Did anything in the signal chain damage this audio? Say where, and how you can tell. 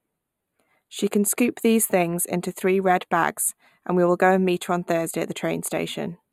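Yes: channel delay (comb filtering) throughout the speech, where one channel lags by about 0.1 ms before summing to mono, cancelling evenly spaced frequencies from roughly 5 kHz upward.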